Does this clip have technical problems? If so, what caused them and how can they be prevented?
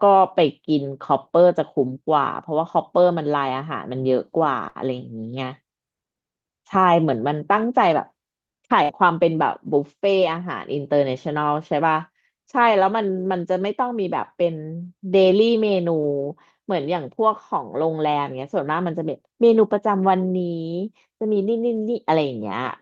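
Yes. There are two bursts of packet loss, at 4.69 to 4.78 s and at 8.83 to 8.92 s. Each time, several packets in a row arrived too late or not at all. The receiver filled the hole by holding the last sound and fading it down. That fill lasts 54 ms the first time and 61 ms the second. Then the speech jumps ahead, skipping 60 ms. Forward error correction and a deeper jitter buffer would help prevent this.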